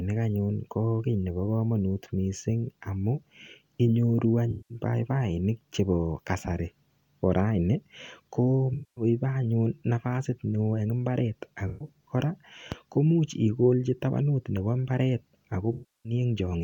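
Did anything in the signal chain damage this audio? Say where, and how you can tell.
Yes. The damage is at the codec stage: AAC frame loss with concealment. There are four smeared, noisy patches where the decoder stretched the last good spectrum over missing frames. They fall at 4.51 to 4.78 s (about 190 ms, just before "paipainik chebo kasari"), 8.73 to 9.04 s (about 235 ms, between "raini ko" and "anyun nafasit"), 11.67 to 11.89 s (about 130 ms, between "eng imbaret" and "kora komuch igolchi tabanut"), and 15.73 to 16.13 s (about 320 ms).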